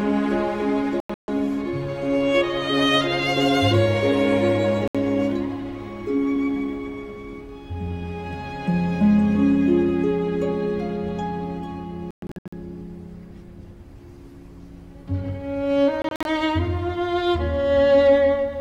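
At 1.00 s the sound breaks into silent gaps spread over about 0.28 s. The longest lasts about 0.14 s. At 4.88 s a single 70 ms hole cuts in. From 12.11 to 12.53 s a longer stutter follows, with gaps up to 0.12 s. At 16.02 s shorter gaps spread over about 0.23 s. Each hole has hard edges or a fade of a few milliseconds. The sound resumes as if it had kept playing. This is likely a Bluetooth dropout, where packets reached the headphones too late.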